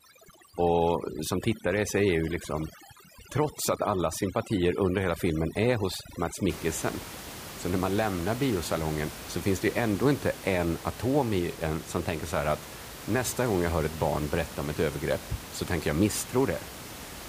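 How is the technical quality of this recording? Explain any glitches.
The recording has one clear problem in its first few seconds. Overdone noise removal runs from 0 to 6.50 s: a noise reduction stage set far too aggressively pulls individual frequency bands down or out whenever they sit close to its noise estimate, and the softer parts of the speech get caught and removed along with the background noise. The gaps collapse into near silence dotted with twinkling specks. After that point the room noise, sitting about 14 dB below the speech, is audible as a background bed instead of being gated away.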